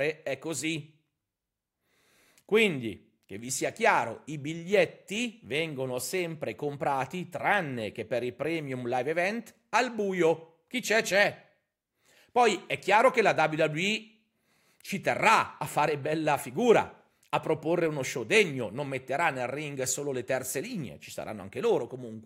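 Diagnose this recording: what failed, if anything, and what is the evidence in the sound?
Nothing failed in this recording, and the sound carries no evidence of a fault.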